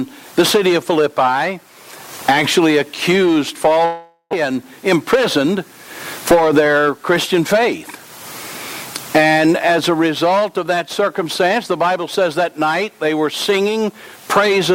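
From 3.85 to 4.45 s there is a long network dropout, likely caused by audio failing to reach the receiver for a stretch. The receiver covers the gap for about 0.47 s by stretching out the last sound into a fading buzz or hiss, then leaves about 50 ms of silence before the audio resumes. Around 0.4 s of the original is simply gone, so the sound picks up further along, with a small jump where a few more milliseconds were trimmed. The playout delay shifts by roughly 50 ms.

From 4.96 to 5.56 s a jitter buffer speed-up follows. The receiver is holding more audio than it wants, so it drains the excess by cutting out many tiny pitch-period-sized pieces in quick succession, about 40 ms in all. The result is audio running at roughly 105% speed with its pitch unchanged. The sound comes across as slightly rushed and its timing feels pushed forward for those 0.6 seconds.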